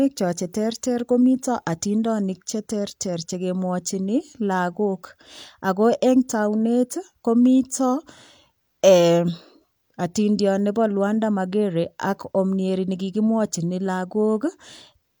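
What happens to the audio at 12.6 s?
Nothing goes wrong at 12.6 s; the speech continues intact through that moment, with no dropout, click or distortion.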